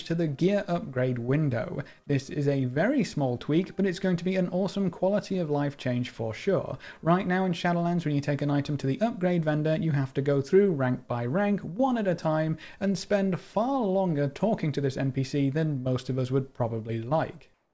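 Right at the tail, from 17.54 to 17.73 s, the background turns into comfort noise: flat, featureless hiss about 2 dB quieter, likely the sender's discontinuous transmission kicking in.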